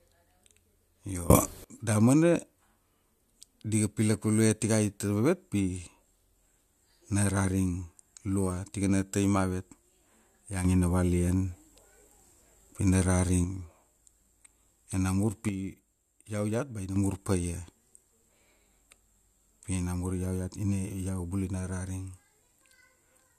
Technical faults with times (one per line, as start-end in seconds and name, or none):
1.30-1.64 sudden gain jump
10.65-13.44 sudden gain jump
15.49-16.96 sudden gain jump